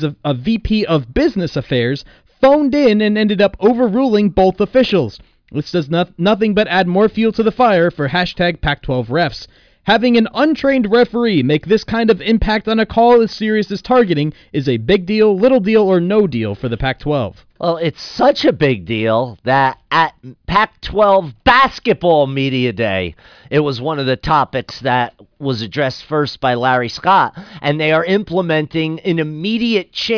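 Nothing in the audio stood out as a technical problem on listening.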